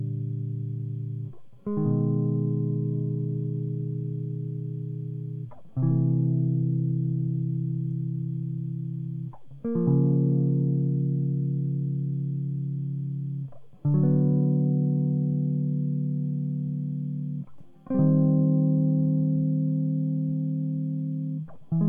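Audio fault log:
Nothing stood out on listening to this music.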